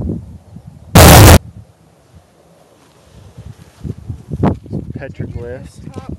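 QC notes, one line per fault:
0.95 to 1.37 s, signed and unsigned mixed up: for about 0.41 s the audio turns into a wall of very loud, harsh distortion, and quiet moments within that stretch are as loud as everything else. The likely cause is 16-bit samples read with the wrong sign convention. That flips the top bit, so every zero crossing becomes a leap across the whole range. Ordinary clipping sounds different, because it only flattens peaks and leaves quiet parts quiet.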